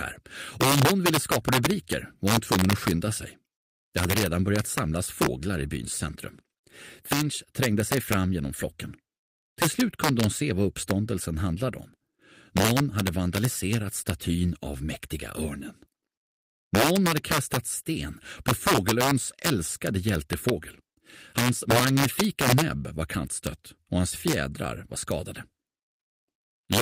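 Integer overflow runs through the whole clip: the signal is driven about 4 dB past the largest value the integer format can hold, and instead of being limited, each peak that crosses that ceiling wraps around to the opposite extreme. Only a small fraction of samples, under one percent, go over, but every one of them jumps across the full range, so the loudest moments of the sound break into violent, sharp cracks far harsher than ordinary clipping.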